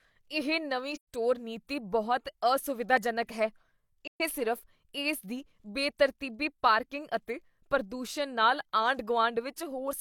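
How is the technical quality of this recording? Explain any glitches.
The recording has two dropouts in the speech. Both are AAC frame loss with muting, at 0.95 to 1.07 s and 4.04 to 4.21 s. Each hole is about 128 ms, which fits three lost AAC frames. The decoder zeroed their spectrum, and the overlapping transform windows fade the sound out and back in, so each gap has soft edges. On a spectrogram it shows as a clean vertical band of silence across all frequencies. On the waveform it is a tapered drop to near silence.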